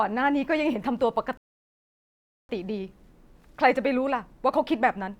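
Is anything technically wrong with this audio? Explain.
Yes, there's a rebuffering stall from 1.37 to 2.49 s. The player ran dry of downloaded audio and just waited, so the speech drops to dead silence for about 1.1 s, then picks up exactly where it left off. Nothing's missing, just extra time.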